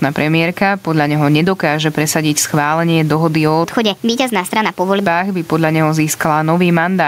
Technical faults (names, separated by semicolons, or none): gain pumping